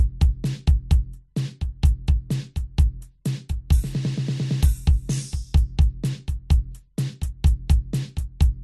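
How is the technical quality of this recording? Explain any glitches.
The technical quality is compromised across the whole piece of music. It sounds dull, with overlapping codec artefacts that never clear.

Throughout, there is transcoding between lossy codecs. Nothing remains above about 12.3 kHz, and two different kinds of artefact overlap. The likely cause is an MP3 encode, consistent with roughly 53 kbit/s, re-encoded to AAC-LC near 48 kbit/s. The second codec wasted bits on the first one's damage, and the lowest cut-off in the chain stayed.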